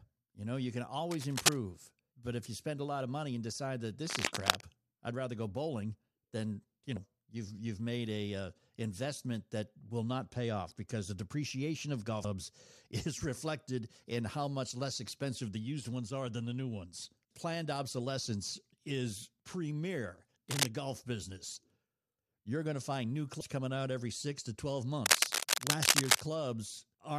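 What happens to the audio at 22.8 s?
Nothing goes wrong at 22.8 s; the speech carries on intact through that moment, with no dropout, click, distortion or other fault.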